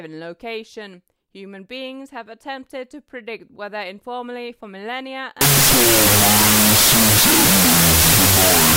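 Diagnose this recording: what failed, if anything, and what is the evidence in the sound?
The sample-format conversion stage broke at 5.41 s. From there to the end, the speech is buried under loud, harsh noise. It is faintly audible underneath, slowed to half speed and an octave low. That's a wrong sample width. The data are being chopped into the wrong number of bytes per sample, so most values are junk built from mismatched bytes. Twice as many values come out, hence the 0.5x speed, which points to 32-bit float read as 16-bit integer.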